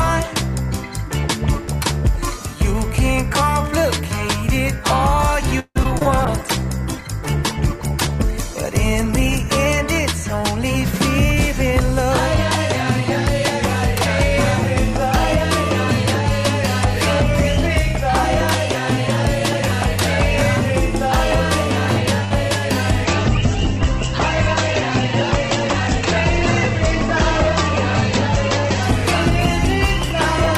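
Around 5.59 to 6.07 s the audio goes choppy and robotic, which is repeated packet loss: four holes in quick succession, the longest 161 ms, each patched by stretching the last sound, so nearly half that stretch is synthetic fill with bits missing. Right after, from 6.26 to 12.19 s, there's a call bitrate drop from 96 to 19 kbps, bottoming out for about 3.4 s, and the coarser coding makes it sound rough and watery. At 22.25 to 22.33 s a short stall from a late packet holds a sound for about 61 ms with a slight buzz or dip, though nothing's actually lost. From 23.05 s to the end a second, deeper bitrate drop takes it from 96 down to 10 kbps for nearly 6 s, and the bandwidth shrinks from 20 kHz to 8 kHz, so it turns muffled.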